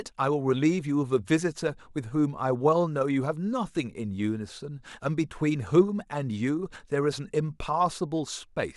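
Speech recording with no audible technical faults.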